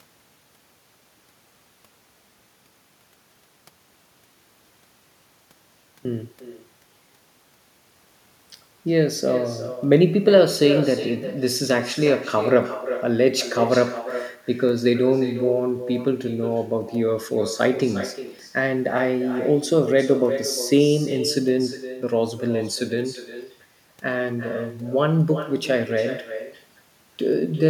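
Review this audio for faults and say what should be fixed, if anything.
Echo with no canceller runs throughout the clip. Every phrase of speech is followed, a little under half a second later, by a copy at about 11 dB below the original. The copy sounds thinner. The far end is playing the call through a loudspeaker, and its microphone is picking that up and sending it back across the network with nothing subtracting it. To prevent it, enable acoustic echo cancellation at the far end or have that participant use a headset.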